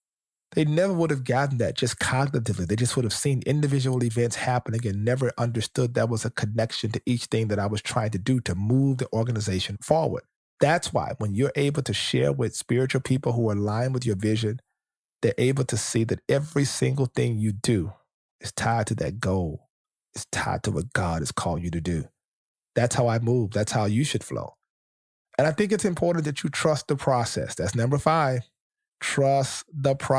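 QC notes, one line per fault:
No faults heard in this speech clip.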